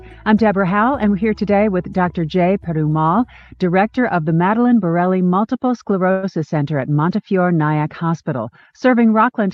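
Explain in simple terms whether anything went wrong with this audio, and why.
At 6.11 s the speech stalls until 6.25 s. That pause of about 0.12 s is filled with a short, fading buzz, and then the speech picks up exactly where it stopped, with nothing lost. This is a call audio freeze, likely caused by late-arriving packets that left the call's jitter buffer empty.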